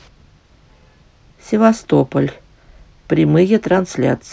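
No technical faults occur at any point in the speech, so there is nothing to describe in time order.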